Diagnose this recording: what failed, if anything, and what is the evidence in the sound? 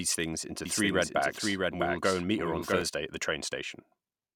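A doubled audio track runs from 0.65 s, just after "things into", to 2.81 s, before "at the": a full-band copy of the speech trails by about 0.7 s, roughly 5 dB quieter. Unlike acoustic echo, it has no decay or room colour and starts and stops abruptly, likely from a second, slower capture path or an editing misalignment.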